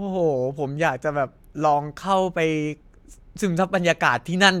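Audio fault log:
No faults detected in this speech recording.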